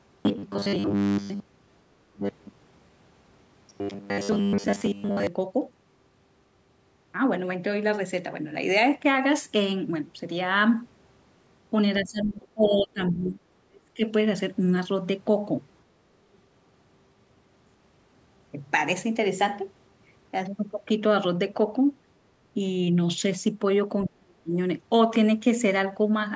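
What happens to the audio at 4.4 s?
At 4.4 s you're still inside a stretch of robotic sound from repeated short buffers, running from 0.01 to 5.27 s. The speech becomes a rigid metallic buzz at 100 Hz, likely because audio arrived too seldom and about 10 ms chunks got looped for most of that span.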